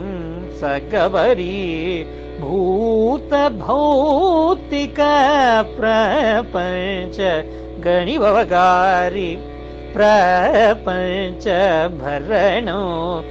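Nothing stood out as a technical fault on listening to the clip.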